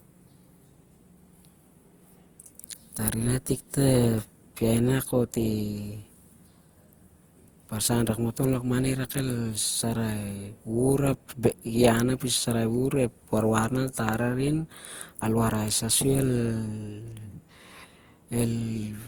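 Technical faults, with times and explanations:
Throughout, generation loss: the speech was likely decoded and re-encoded about five times through a lossy codec, consistent with Opus at 48 kbit/s. Each pass requantises on a shifted frame grid, so noise accumulates, giving a swirly, hollow, smeared sound with softened consonant attacks.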